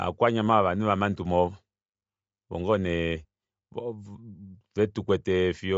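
Throughout, Bluetooth LC3 compression at a low bitrate is the likely cause: the codec drops upper-spectrum detail and fills the gaps with noise, which fits about 32 kbps in 10 ms frames. Nothing sounds above 7.7 kHz, and the speech carries a plainly audible breathy, grainy edge.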